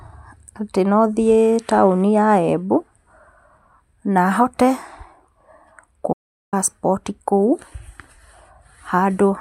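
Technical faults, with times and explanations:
6.13–6.53 s, audio dropout to silence: the speech cuts to silence with no room tone for about 0.4 s, likely because the input was lost while recording continued.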